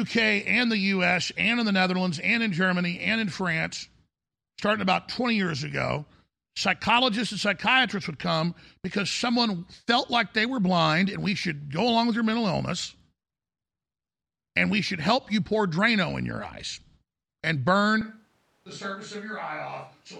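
A speech recording in which, at 18.01 s, the sound abruptly turns roomy and hollow, loses low end, and drops by roughly 10 dB, with background noise sitting at around 30 dB below the speech. This character holds through to the end of the clip. The sudden shift in tone and level points to a switch to a distant microphone, likely because the close microphone's feed failed or was dropped and a farther pickup took over.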